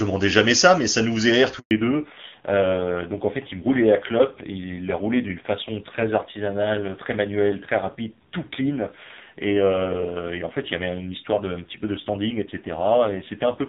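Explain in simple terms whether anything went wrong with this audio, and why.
Yes, two things went wrong, right next to each other. At about 1.59 s there's a handover gap: the call was being passed from one network to another, and for roughly 120 milliseconds nothing came through. The speech cuts out abruptly until 1.71 s, and whatever was said in that moment is gone.

Right after the gap, from 1.71 s to the end, there's a fallback to narrowband. The first second and a half was clear HD Voice. After the switch, the call drops to an older, lower-quality phone codec that discards everything above 4 kHz. The voice turns muffled, dull and a bit gritty for the rest of the clip.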